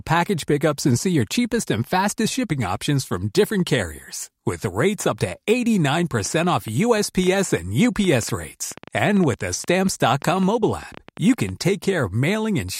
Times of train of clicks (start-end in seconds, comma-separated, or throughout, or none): 6.20-11.50